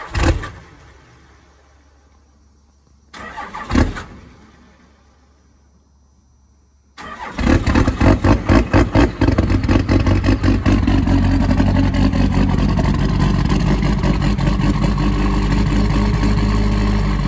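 No faults are audible; the audio has the band-limited character of a wideband call path, with nothing above 8 kHz, which fits G.722.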